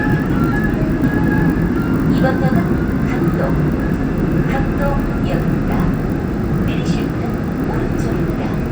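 From start to finish the clip shows a resampler restarted on every block: the upsampling from 24 kHz to 48 kHz was run on each 20 ms block in isolation, so every block edge lacks its true neighbouring samples and picks up a small error. Those edges recur at 50 Hz, heard as a buzz riding on the sound and vanishing in silence. A spectrogram shows thin vertical lines every 20 ms, and the waveform shows small discontinuities at the same spacing.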